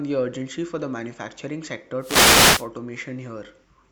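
From 1.99 s to 2.68 s, a wireless microphone noise hit lasting about 0.7 s breaks into the speech. The FM radio link fades as reflected signals cancel at the receiver, so its noise floor rises and a swish of static is heard over the voice. On a spectrogram this shows as a broadband haze across the whole frequency range, filling the gaps between the speech harmonics. The waveform shows a raised, fuzzy floor for that stretch.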